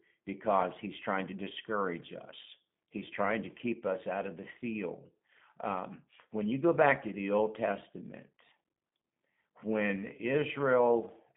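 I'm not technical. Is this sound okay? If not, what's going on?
No, it isn't quite clean. Throughout the clip the speech has gone through a G.729 codec, a phone-call coder that rebuilds the voice from a rough model instead of sending it as it is. Everything above about 3.6 kHz is gone, so the sound is muffled, and the rebuilding leaves a plainly audible rough, slightly synthetic edge.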